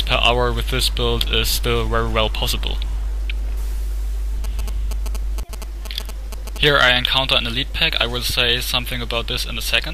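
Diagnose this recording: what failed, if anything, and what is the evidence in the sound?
GSM signalling bursts break in from 4.44 s to 6.58 s, a galloping dit-dit-dit of short buzzes pitched at 217 Hz, sitting roughly 10 dB below the programme. The fault is in the analogue wiring. A nearby 2G phone exchanging signalling traffic emits short groups of radio bursts, which the audio circuit rectifies into audio. The burst repetition rate becomes the 217 Hz buzz, and the grouping produces the galloping rhythm.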